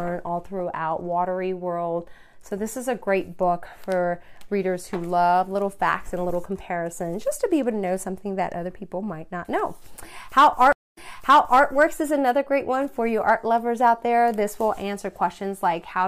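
A stream reconnect hits this audio at 10.73 s: a blank vertical band of about 0.21 s on the spectrogram and flat line on the waveform, then playback resumes about 0.7 s earlier under a fresh decoder, so the patterns before the gap repeat until 11.64 s.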